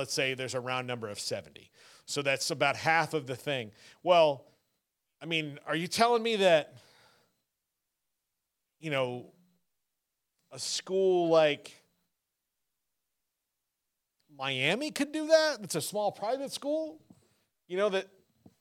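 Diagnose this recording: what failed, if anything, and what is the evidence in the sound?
A block of digital silence at 8.98 s points to the driver or buffer stage: the speech drops to silence for about 1.45 ms, which fits a 64-sample buffer left unfilled, and returns with no fade. That abrupt cut produces a tick or dip, not a fading dropout.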